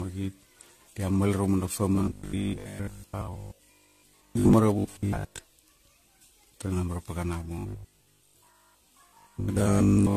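Generation loss runs through the whole speech clip: the sound is swirly, smeared and hollow, with blurred attacks and nothing above 14 kHz. It likely comes from about ten passes through a lossy codec such as AAC, perhaps near 64 kbit/s, each requantising on a shifted frame grid.

Robotic sound from repeated short buffers appears at 1.95 to 4.53 s, 4.79 to 5.39 s and 7.59 to 10.16 s. It is a rigid metallic buzz at 50 Hz, which fits a 20 ms chunk replayed in place of most of the real audio, likely because new buffers arrived too late.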